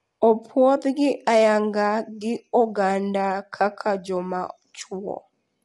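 Speech, likely coded throughout with low-delay AAC compression at a low bitrate, around 32 kbps: voices sound rough and grainy, with nothing above 11.5 kHz.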